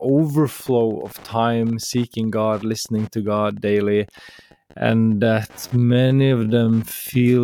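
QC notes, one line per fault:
Throughout: Wi-Fi interference. A nearby radio's beacon every 102.4 ms is being rectified by the audio circuit, giving a steady tick about ten times a second, roughly 30 dB below the speech, with rasping bursts wherever data traffic passes between beacons.
4.44–7.44 s: time-stretched section. From here to the end the pace suddenly drops to about 0.52 times normal while pitch holds steady, likely because software stretched the audio by repeating short pieces, so the speech drags and sounds drawn out.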